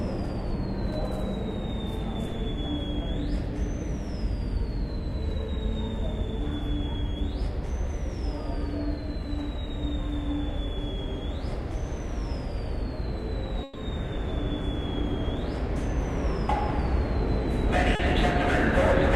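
A recording of everyday sounds. From 13.63 to 13.77 s the last sound stretches into a held, fading tail, then jumps ahead: a burst of packet loss, where about 120 ms never arrived and was concealed by continuing the preceding audio. Between 17.95 and 18.01 s a brief smear appears, from short concealed packet loss: roughly 40 ms went missing, was filled by extrapolating the last sound, and was blended back into the real signal.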